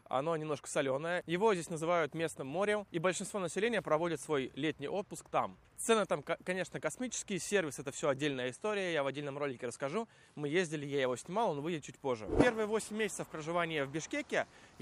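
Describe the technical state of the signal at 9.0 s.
At 9.0 s the signal sits inside an input switched to a poorer device, running from 8.34 s to 10.83 s. The capture likely moved to a different, lower-grade microphone path for that stretch, so the band is cut off with nothing above 11.4 kHz, and a new background noise floor appears around 55 dB under the signal. The sound turns duller without any gap or obvious level jump at either switch point.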